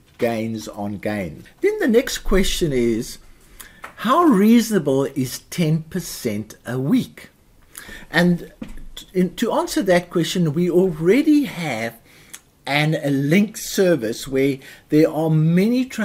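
No technical faults are audible anywhere in the recording.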